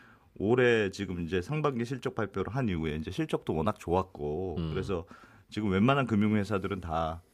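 Nothing goes wrong anywhere in this recording; there isn't a single technical fault to point to from beginning to end.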